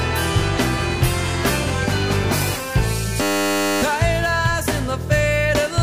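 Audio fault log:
3.22 to 3.82 s: system hang loop. The system stalled while the sound hardware kept replaying its buffer. One 10 ms slice repeats exactly, about 60 times. At 100 repeats per second, the stutter fuses into a steady buzz. Almost no audio is lost.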